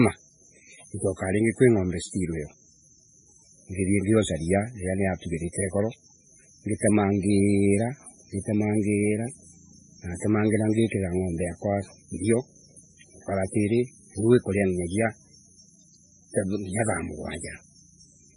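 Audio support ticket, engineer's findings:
Speech, whole clip: band-limited, nothing above 10.5 kHz; warbly smearing overlaid with a second coding grain. Likely transcoding between lossy codecs: very-low-rate MP3-type stage re-encoded, plausibly by WMA 1 at a moderate rate. Later encoder re-codes earlier damage, adds its own.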